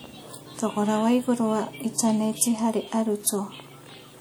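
Speech runs with plainly audible codec damage from start to finish, most likely WMA compression. The speech carries a ringing, washy smear, and a hiss rises and falls with the level of the sound. These traits point to a transform codec whose long blocks spread quantisation noise over tens of milliseconds and drop weak spectral lines. The damage fits a bitrate around 48 kbps. Content still reaches about 20.1 kHz, which rules out simple bandwidth limiting as the cause.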